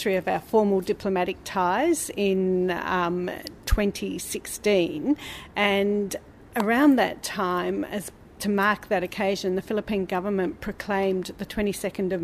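A nearby switch or motor likely arced onto the line, causing an electrical switching spike: a sharp snap at 3.47 s, and a louder one at 6.60 s.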